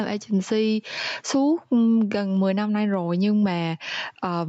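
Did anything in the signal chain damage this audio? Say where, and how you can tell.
Yes. Gain pumping runs through the whole speech clip, with a gain swing of roughly 15 dB. The likely cause is microphone gain set far too high, with a fast limiter clamping each peak and squashing the dynamics.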